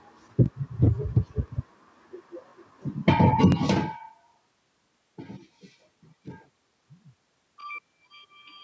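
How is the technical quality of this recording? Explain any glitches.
The recording has two short glitches from overlapping chunks, one at 0.46 to 0.48 s and one at 3.52 to 3.54 s. Each sounds like a quick stutter or click in the speech. The audio was handled in blocks of about 1 s, and at these joins the new block began before the previous one had finished, so about 21 ms of sound plays twice in a row. Near the second glitch the voice also changes level as the talker moves relative to the microphone.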